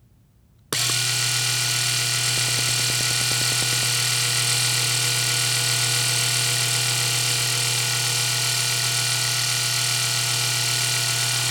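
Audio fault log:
2.38–3.84 s, train of clicks: about 15 closely matching pulses at an even 9.6 per second, peaking roughly 10 dB above the sound. The matching shape and steady spacing set it apart from random crackle or isolated pops. Likely interference or a faulty connection or power supply.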